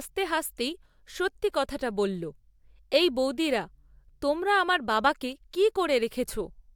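No technical faults can be heard anywhere in the speech recording.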